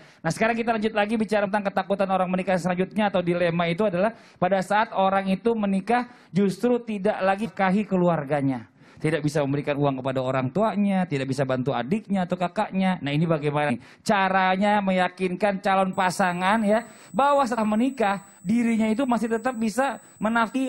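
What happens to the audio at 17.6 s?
At 17.57 s, compressed frames are skipped: the audio jumps ahead about 150 ms, which points to roughly seven 23.2 ms frames left out. USB whine also runs underneath from 15.93 s, a steady 8 kHz tone strongest at 16 kHz and about 25 dB below the signal.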